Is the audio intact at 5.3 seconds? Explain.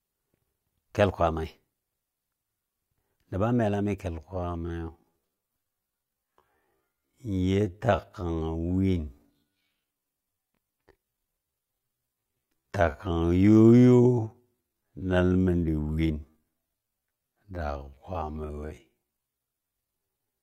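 No. At 5.3 seconds the speech is dragged out to roughly half its normal pace, yet the pitch stays where it was. This time-stretched section begins abruptly at 4.09 seconds and runs to the end at 20.42 seconds, playing at about 0.53 times the original speed. The likely cause is software lengthening this stretch to fill a set duration, repeating short slices of the sound to preserve pitch.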